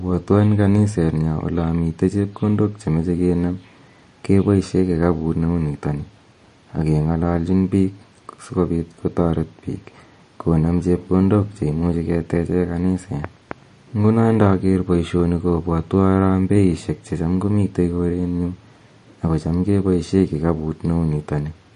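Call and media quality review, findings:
MP3 compression, throughout: treble gone above 10.6 kHz, watery swirl on speech and chirpy, metallic s sounds. Likely an MP3 encoder starved of bits, which fits roughly 40 kbps, cutting the top band and dropping weak frequency lines frame to frame.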